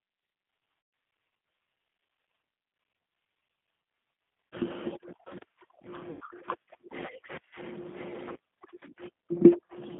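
The whole clip carries the sound of the G.729 codec. The speech is confined to roughly 150 Hz to 3.5 kHz and has the rough, slightly synthetic grain of an 8 kbit/s model-based coder. That grain sets it apart from simple telephone band-limiting, which would sound muffled but clean.

VoIP packet loss concealed by the speech codec breaks in four times: 0.81 to 0.93 s (120 ms), 4.49 to 4.56 s (40 ms), 6.11 to 6.23 s (100 ms) and 8.32 to 8.37 s (40 ms). The longest gap fits about six lost 20 ms packets. Unlike a plain dropout, these gaps aren't silent. The decoder stretches the last sound into a fading buzzy tone or coloured noise, and the speech stays weak or distorted briefly after each gap.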